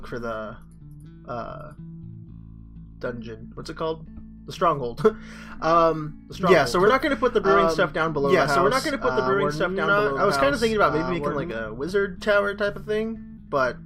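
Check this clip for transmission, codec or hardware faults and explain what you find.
There is one fault: a doubled audio track from 6.07 s to 11.51 s. In that span a second full-band copy of the sound trails the original by about two seconds, somewhat quieter, around 5 dB down, with no reverberant tail or room colouring, and it cuts in and out abruptly at both ends. The likely cause is the same signal being picked up again through a slower path, or an edit leaving two misaligned copies stacked together.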